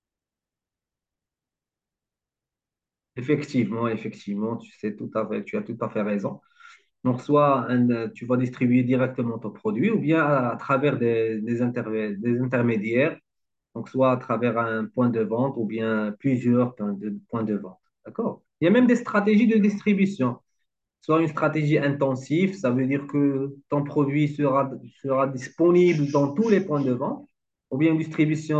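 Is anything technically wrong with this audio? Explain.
No, nothing technically wrong can be heard here.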